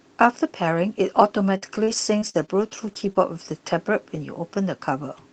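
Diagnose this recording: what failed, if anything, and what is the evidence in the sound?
Repeated packet loss on the network, 1.57 to 3.17 s. Speech turns choppy and robotic. Missing stretches, up to 46 ms, are patched by extending earlier sound.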